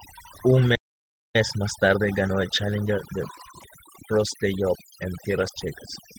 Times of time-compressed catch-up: 1.36-4.36

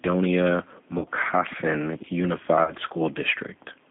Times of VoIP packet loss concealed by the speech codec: 0.98-1.09, 2.64-2.73

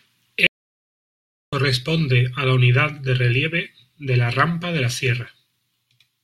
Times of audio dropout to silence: 0.47-1.53

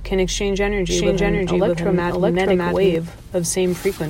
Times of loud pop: none

